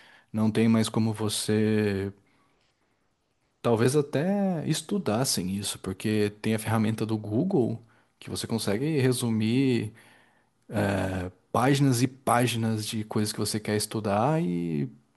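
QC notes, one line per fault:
No faults heard anywhere in the speech.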